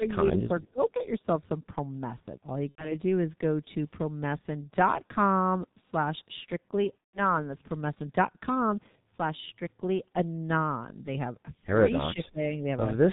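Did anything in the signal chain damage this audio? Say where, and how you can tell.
Yes. The whole clip went through a G.723.1 codec at the codec stage. The speech is muffled and hoarse, and the consonants are smeared. On a spectrogram, nothing sits above 4 kHz, and the harmonic structure looks coarse and blocky from frame to frame. This level of damage points to a rate around 6.3 kbit/s. The coder models the voice with 30 ms frames and updates that model slowly, so fast transitions between sounds blur together.

In the first 0.53 s, call processing pulls the level down in patches, by about 5 dB at the deepest and for roughly 150 ms in total. On a waveform, the envelope dips unevenly rather than fading smoothly. The likely cause is an echo canceller that met double talk: it could not tell this talker from the far-end echo and turned the signal down.

The network stage dropped packets twice, and the decoder concealed each loss: from 2.69 to 2.94 s (90 ms lost, which fits three 30 ms frames) and from 6.99 to 7.32 s (150 ms lost). 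Each gap starts as a stretched, fading sound and then goes silent, because the decoder mutes from the third lost frame in a row. On a spectrogram, the frozen, repeating content fades and then cuts to silence. The waveform stays weak for a short time afterwards because each decoded frame builds on the guessed one before it.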